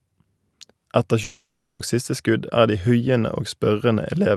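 A long network dropout runs from 1.23 to 1.81 s. The speech turns into a buzzy continuation that fades, then about 0.23 s of near-silence, and resumes at "og siste skudd er" with 0.56 s lost, likely because no packets arrived while the receiver concealed the gap.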